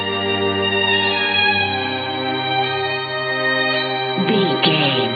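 No faults detected anywhere in the audio.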